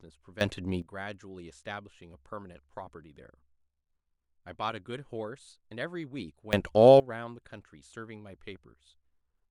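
At 0.41 s and 6.53 s, speech and background jump together by about 15 dB and about 18 dB, for about 0.4 s and 0.5 s. These sudden gain jumps likely come from unramped digital gain changes.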